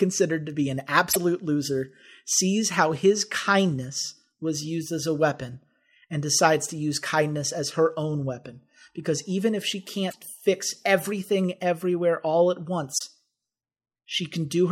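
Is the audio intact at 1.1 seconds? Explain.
No. Between 1.09 and 1.17 s, right after "to be an" and just before "loser sees how his", the speech runs into damaged data in a compressed stream. A stretch of the encoded bytes is corrupt, so the decoder misreads the frames there, loses its place in the bitstream and has to hunt for the next valid frame header before it can resume. For those roughly 80 ms, the speech gives way to a brief, harsh blip.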